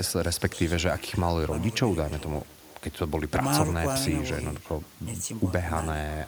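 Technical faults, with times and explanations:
Throughout, echo with no canceller: the speech gets shadowed around 0.4 s later by a faint, thin copy, about 22 dB down, as a far-end speaker feeds back.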